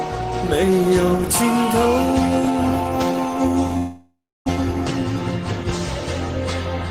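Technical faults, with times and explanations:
3.77–4.62 s, long network dropout: the sound smears into a buzzy continuation of its last moment that fades over about 0.7 s, leaving roughly 320 ms of near silence before audio resumes. About 400 ms of content never returns. The pattern points to a burst of packets likely lost in transit. The receiver's concealment extends the final good sound, and on recovery it trims about 11 ms, shifting playback timing by around a third of a second.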